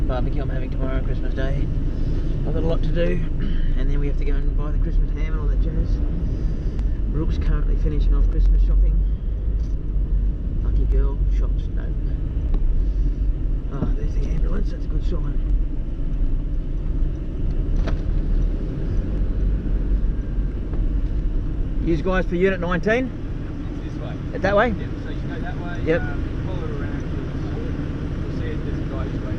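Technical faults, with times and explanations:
Nothing stood out on listening to the clip.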